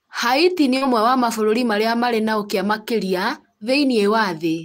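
At 0.77 s a short concealed packet loss interrupts the speech, just before "ũmwe wa mabũrũri marĩa". About 40 ms of audio never arrived in time to be decoded. The receiver covered the gap by extending the preceding sound, running roughly 38 ms of synthetic continuation before blending back into the real signal at 0.83 s. The repair is heard as a brief smear or wobble rather than silence.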